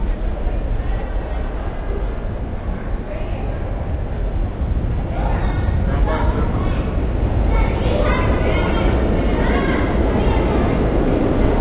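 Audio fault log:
No faults are present in the sound, which arrives over a call path using G.711 mu-law at 64 kbps and so carries nothing above 4 kHz, as that codec normally does.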